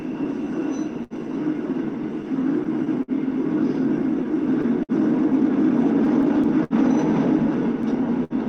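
Clock drift between sender and receiver runs through the whole recording of everyday sounds. The sender's clock runs roughly 5 percent slow, so the receiver's jitter buffer keeps draining, producing small timing hiccups at uneven intervals from start to end.

Repeated stalls (stutter) first appear from 0.03 to 1.13 s: five gaps, about 101 ms concealed in total, the longest 67 ms. Late-arriving packets left the buffer empty, so the last sound was held and faded in the longer waits. Nothing is lost, but the sound drags.

Repeated timing corrections run from 0.60 to 8.02 s. To keep pace with the slow sender, the receiver repeats short pieces, adding around 40 ms overall. The edits all go the same way and are unevenly spaced.

The stutter returns three more times: from 2.22 to 3.11 s with four gaps totalling 84 ms (longest 54 ms), from 4.24 to 4.92 s with three gaps totalling 78 ms (longest 56 ms), and from 6.05 to 6.73 s with four gaps totalling 94 ms (longest 65 ms).

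A short stall from a late packet occurs at 8.24 to 8.33 s. One packet missed its slot, so the receiver stretched the preceding sound by 61 ms and then resumed from the same point. This leaves a held sound with a faint buzz or dip.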